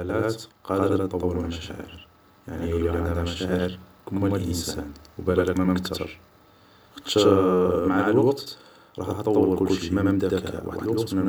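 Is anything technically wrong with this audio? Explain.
Yes. A channel delay (doubling) runs through the whole speech clip. One channel arrives about 93 ms after the other, which fits a 4096-sample buffer, and once the two are folded to mono the late copy stands apart as a slap echo at equal level behind every syllable. A short inter-channel offset would smear into comb-filter colouring, and room reverberation would decay and blur. This is one distinct, undecayed repeat at a fixed spacing.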